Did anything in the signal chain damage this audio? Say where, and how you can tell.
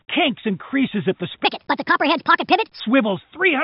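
Yes. From 1.45 s to 2.80 s the sound jumps high and hurried, running 1.41 times fast and about seven semitones sharp, over the call path's 4 kHz band limit. Pitch and tempo shift together, so this section at the wrong speed likely comes from playback or editing against the wrong clock.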